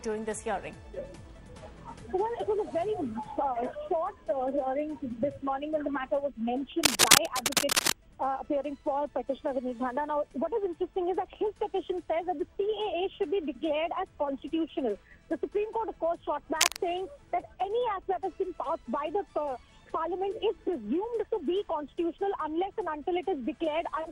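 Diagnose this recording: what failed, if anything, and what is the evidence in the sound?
Cable scratch noise in the analogue wiring, at 6.83 to 7.92 s and 16.61 to 16.77 s: dense, ragged bursts a few dB above the sound, likely from a worn connector's fluctuating contact resistance.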